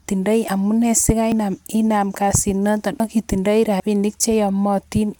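Incoming samples were likely overwritten before being read, a dropped buffer (overrun), so the speech skips ahead: 0.48 s (about 40 ms lost), 1.32 s, 3.0 s between "kasit noton" and "ak itindoi" (about 70 ms each), and 3.8 s after "kasit noton ak itindoi" (about 40 ms).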